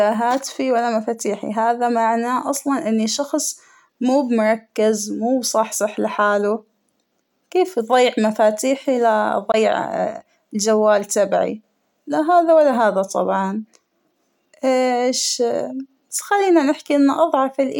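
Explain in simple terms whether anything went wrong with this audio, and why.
A Bluetooth dropout is the likely cause: a small piece of the audio did not reach the headphones in time and was thrown away. At 9.52 to 9.54 s, just after "كيف أضيع مفاتيحى ل", the speech cuts out for a split second and comes back. About 19 ms of sound is missing, which fits a single lost packet, and the speech resumes as though it had kept playing through the gap.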